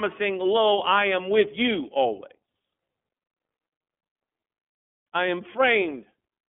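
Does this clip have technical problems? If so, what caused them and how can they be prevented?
Yes. The speech runs through an iLBC codec for its whole length, and the damage is plainly audible. Nothing reaches above about 3.6 kHz, and the lows are thin, in line with a 200 Hz to 3.4 kHz telephone band. Each 30 ms frame is coded on its own, so the voice sounds slightly rough and synthetic, a grainy texture rather than the warbling, swirly artefacts of a wideband perceptual codec. To prevent it, carry the call over a wideband codec instead.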